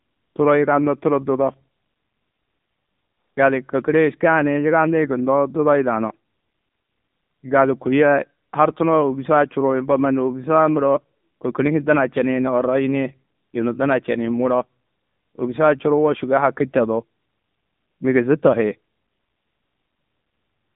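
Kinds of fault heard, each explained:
AMR narrowband mobile codec: the whole clip sounds like an old 2G/3G phone call, squeezed into roughly 150 Hz to 3.7 kHz with nothing above. The speech comes out plainly buzzy and synthetic, which fits a low mobile bitrate near 8 kbps.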